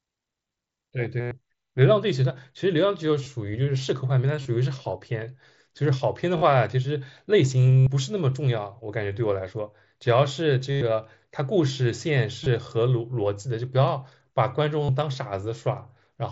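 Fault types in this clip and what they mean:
Concealed Bluetooth headset packet loss: eight gaps from 1.2 to 14.9 s, 22.5 to 105 ms long, filled by repeating recent waveform, heard as buzzy held tones.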